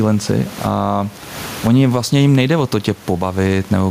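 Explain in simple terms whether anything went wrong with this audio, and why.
Gain pumping runs through the whole recording. The likely cause is the microphone level being set far too high, with a fast automatic limiter pulling it down hard on every loud moment. That squeezes loud and soft parts together and makes the speech sound flattened.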